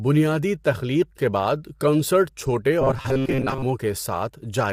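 All the way through, the speech has a plainly audible rough, grainy quality, likely low-delay AAC compression (AAC-ELD), which points to a low bitrate around 32 kbps. From 2.81 to 3.66 s it turns into a rigid buzz at 133 Hz. That's likely the robotic sound from repeated short buffers: a chunk of roughly 7.5 ms gets replayed, covering about half that stretch.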